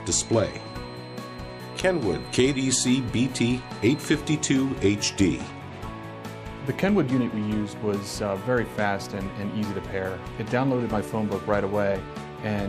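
A feedback whistle runs from the start to 4.27 s: a thin, steady tone at 4.1 kHz, sitting roughly 25 dB below the main sound and swelling and fading slowly in level. The likely cause is a loudspeaker-to-microphone loop held just at the edge of feedback, where gain at that one frequency is high enough to keep it ringing but not enough for it to build into a howl.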